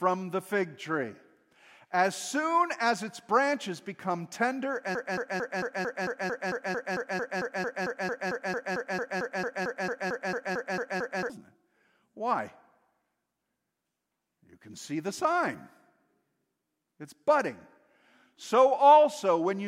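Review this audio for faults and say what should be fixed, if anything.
From 4.95 s to 11.30 s the speech turns into a broken-record loop: a 0.22 s fragment repeats exactly, back to back, 28 times, and the speech that belonged in those six seconds is lost. The likely cause is a stalled player or stream replaying its last held buffer. On a waveform or spectrogram it shows as identical blocks tiling every 0.22 s. To prevent it, detect the stall and output silence rather than recycling stale data.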